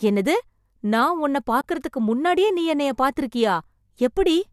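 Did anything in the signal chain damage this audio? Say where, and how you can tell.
Yes. At the network and codec stage there is an AAC frame loss with muting from 1.61 to 1.64 s: a 30 ms gap, which fits three lost frames of the likely low-delay AAC stream, zeroed by the decoder. Overlapping windows fade it out and back in, leaving a soft-edged hole.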